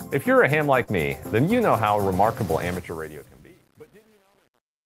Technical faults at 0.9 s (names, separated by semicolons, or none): short concealed packet loss